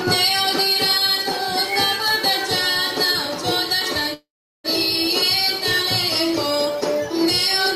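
A call audio freeze runs from 4.13 to 4.66 s: the last sound stretches into a fading buzz or hiss, then about 0.39 s of silence, before the audio resumes where it stopped, likely because delayed packets emptied the jitter buffer. Nothing is lost; everything afterwards arrives about 0.51 s late.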